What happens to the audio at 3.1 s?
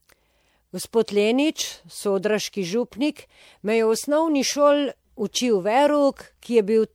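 At 3.1 s the speech carries generation loss, and it isn't local to that moment: the same degradation runs through the whole clip. The sound is swirly and hollow, with smeared consonant onsets and a watery texture in the upper band. The likely cause is repeated lossy encoding, a few successive MP3 passes at a rate that fits about 96 kbit/s, each requantising on a shifted frame grid so the noise and spectral gaps accumulate.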